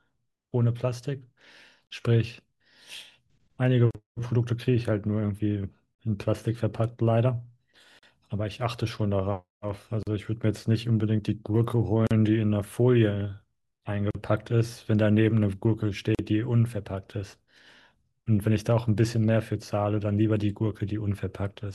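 At 1.87, 3.91, 5.95, 7.99, 10.03, 12.07, 14.11 and 16.15 s the speech breaks with a gap at a join of encoded pieces. Each is a 40 ms silence, one every 2.0 s, left by encoder delay and end padding at separately encoded joins. Unlike a dropout, nothing is lost: speech resumes exactly where it stopped, with smeared edges.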